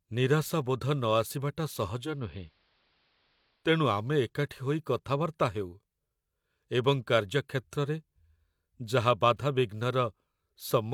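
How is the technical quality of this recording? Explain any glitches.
The recording has one glitch, a short stretch where the sound briefly drops to AM-radio quality.

From 1.94 to 3.76 s, digital radio blending to analogue occurs. The receiver cross-fades over about 280 ms to the station's AM broadcast, so a faint hiss, roughly 40 dB down, appears at unchanged loudness. It fades back to digital just before "ଆମେ ଏକାଠି ହୋଇ କଥାବାର୍ତ୍ତା". The smooth fades and the added hiss distinguish it from an abrupt codec dropout or a plain low-pass filter.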